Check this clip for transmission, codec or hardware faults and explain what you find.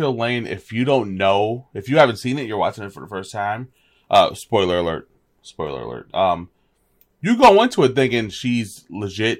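No faults can be heard anywhere in this speech recording. Nothing along its course calls for a closer look.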